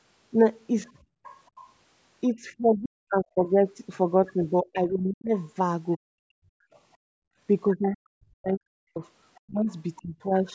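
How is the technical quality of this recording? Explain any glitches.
The recording's technical quality suffers from an echo canceller struggling on a call. The room background is gated twice, the other side's voice leaks in three times, and the talker's speech is pushed down during three stretches of double talk. The top of the band stops at 8 kHz, which is the call's microphone processing working as intended.

Background gated by the echo canceller, at 1.03–1.24 s and 6.97–7.38 s: while the loudspeaker was playing, the canceller clamped the microphone. The room sound drops by about 24 dB and then about 37 dB, for roughly 0.2 s and 0.4 s, before springing back.

Other side's voice leaking through, at 1.24–1.61 s, 5.95–6.79 s and 9.35–10.02 s: a faint second voice sits beneath the speech, about 25, 40 and 30 dB below it. This is likely loudspeaker echo that the canceller failed to subtract from the microphone signal.

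Speech suppressed in double talk, at 2.3–3.36 s, 4.63–6.63 s and 7.74–10.3 s: the talker's voice dips and breaks up, falling by up to around 40 dB for roughly 0.7, 1 and 1.5 s in total. The likely cause is both sides talking at once, so the canceller turned everything down.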